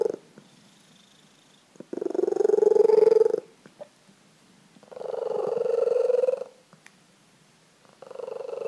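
No technical faults can be heard anywhere in the recording. There are no events to place in time, and nothing calls for a description.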